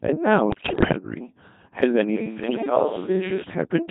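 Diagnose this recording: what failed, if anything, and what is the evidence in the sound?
The whole clip has gone through the Codec 2 vocoder, so the failure is at the codec stage. The speech is robotic and buzzy from start to finish, and the damage is heavy, which fits the 2.4 kbit/s mode. Codec 2 never keeps the waveform. It sends only pitch, voicing, level and a rough spectral envelope, and then the decoder rebuilds the voice from sine waves. That's why everything has that synthetic, hollow-edged quality.

On top of that there are bit errors on the digital voice radio link, in two bursts, from 0.50 to 0.92 s and from 2.44 to 2.70 s. In both places the synthetic voice jumps in pitch, level and tone colour, breaking into warbly, bleepy gibberish. At this bitrate every bit steers a whole frame's parameters, so corrupted bits scramble the resynthesis outright. The first burst sounds like around 18 frames hit at a fairly high error rate, and the second like about 10 frames at a somewhat lower one.

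From 2.17 to 3.42 s the sound turns suddenly roomy and hollow, with less low end, and then snaps back. The level barely changes, but room noise comes up to roughly 25 dB below the speech. This is likely a switch to a distant microphone, meaning the recording fell back to a mic further from the talker, which puts the failure in the capture stage. The abrupt change in both directions is the giveaway.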